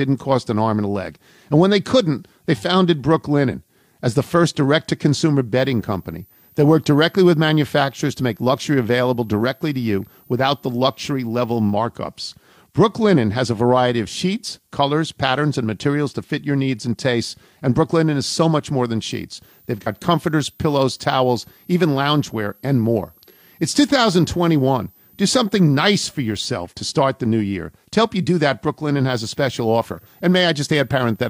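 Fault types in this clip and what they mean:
Switching supply whistle: a high, thin whistle runs under the speech for the whole clip, sitting in the 12.2 to 17.7 kHz band, mostly around 15 kHz, and roughly 35 dB below the speech. A switching power supply is cycling at a rate low enough to be heard, either in a light-load burst mode or beating against another supply, and that tone is leaking into the audio.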